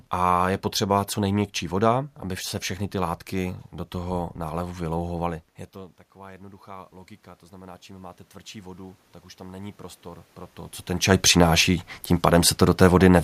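From 3.41 to 6.98 s, just after "aby se všechny ty", the automatic gain control judges the input too quiet and raises its gain by about 5 dB, so the speech and room noise swell together. From 7.5 to 10.37 s, ending just before "to co ten čaj", the input drops by about 24 dB and the automatic gain rises by about 7 dB, lifting the background noise again.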